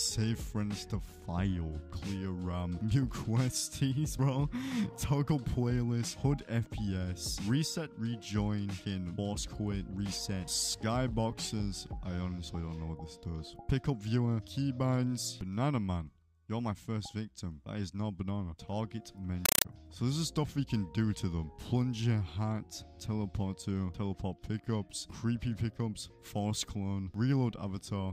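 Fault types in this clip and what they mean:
Compressed stream played as audio: an AC-3 bitstream was passed on as ordinary samples instead of being decoded, so from 19.46 to 19.65 s the sound is replaced by loud, chattering static made of 5.33 ms noise bursts repeating 31.25 times a second.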